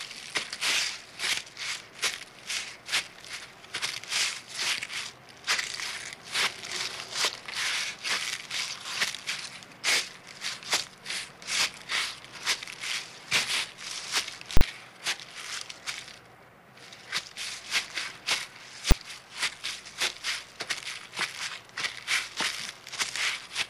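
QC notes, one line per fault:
14.57–14.61 s and 18.91 s, invalid numbers at full scale: a violent pop-silence-pop over 40 ms, then a single sharp bang at 18.91 s, where a calculation produced invalid values that were pinned to the largest possible sample value for each block.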